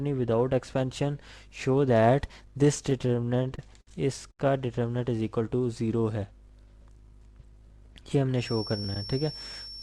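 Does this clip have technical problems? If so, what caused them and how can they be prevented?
Yes. From 2.83 to 3.88 s there are repeated stalls, a stutter. Packets arrived late or too slowly, so the jitter buffer ran dry eleven times. The receiver held the last sound, filling 174 ms in total, with the longest gap 60 ms. That is 17% of the span. Nothing is lost, but the audio drags. A steadier network path or a deeper jitter buffer would prevent it.

At 4.31 to 4.40 s there is a short stall from a late packet. The delay jumped by 80 ms, so the receiver stretched the last sound for 80 ms and then resumed where it left off. A sound is held too long. More buffer headroom against sudden delay changes would prevent it.

From 6.80 to 8.15 s comes a jitter buffer speed-up. Too much audio had built up, so the receiver trimmed short pitch-period pieces, about 50 ms in all. Playback ran at 103% speed with the pitch unchanged. 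Smoother packet delivery avoids the backlog that forces this catch-up.

From 8.34 s to the end there is a feedback whistle. It is a thin, steady 5.4 kHz tone about 15 dB below the main sound, swelling and fading slowly. The likely cause is a loudspeaker-to-microphone loop sitting at the edge of feedback. Lower speaker gain, headphones or feedback suppression would prevent it.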